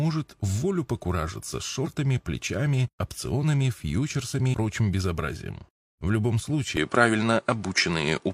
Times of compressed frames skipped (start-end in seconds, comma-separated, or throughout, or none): 1.81-1.87, 4.50-4.55